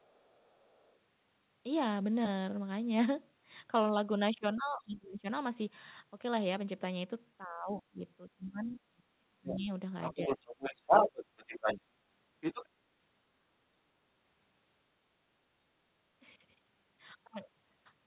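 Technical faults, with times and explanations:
0.0–0.98, 8.65–8.69, 9.48–9.58, 10.02–11.81 and 12.41–12.68 s, other side's voice leaking through: a second voice sits faintly underneath at first, then grows roughly as loud as the talker, likely loudspeaker echo the canceller failed to remove.
4.56–5.26, 7.44–9.71 and 10.14–10.76 s, speech suppressed in double talk: the talker's voice sinks steeply or breaks up in pieces, likely because the echo canceller turned everything down while both sides spoke together.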